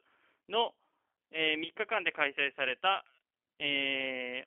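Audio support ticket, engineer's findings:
G.729 codec damage, plainly audible throughout. Band limited to 300 Hz–3.4 kHz, nothing above 4 kHz. Rough, synthetic timbre, consistent with 8 kbit/s G.729A. Speech rebuilt from vocal-tract filter, pitch predictor and sparse pulses per 10 ms frame.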